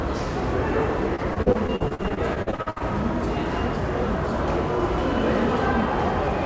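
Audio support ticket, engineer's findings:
Choppy, robotic stretch 1.16–2.82 s, repeated packet loss: 19 gaps up to 61 ms, each patched by extending prior audio, roughly a third concealed. G.722 call path, nothing above 8 kHz.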